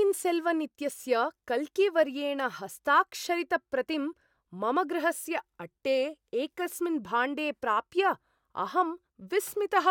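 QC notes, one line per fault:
No audible faults found in this speech recording.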